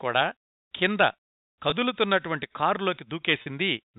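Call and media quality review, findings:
Brief held, buzzy note at 1.70–1.72 s and a longer one at 3.42–3.46 s, bridging gaps of 20 ms and 40 ms. Packet loss with pitch repetition: receiver concealment repeats last pitch period, consistent with one and two lost 20 ms packets. Band-limited G.711 telephone coding audible throughout.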